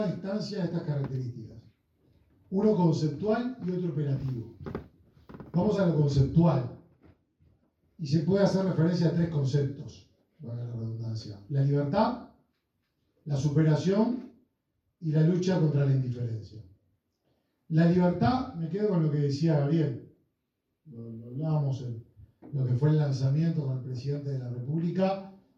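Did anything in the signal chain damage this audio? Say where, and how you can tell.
No, nothing along the chain shows any audible damage, and there is no stage to point to.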